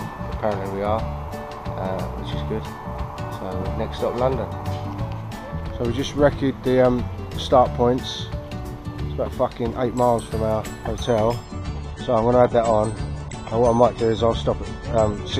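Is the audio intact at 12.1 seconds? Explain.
No. At 12.1 seconds the audio is in a stretch of adaptive stream at a lower bitrate, from 11.45 s to the end at 15.39 s. The stream switched to a cheaper encoding without any gap. Nothing remains above 10 kHz, which points to roughly 32 kbit/s AAC.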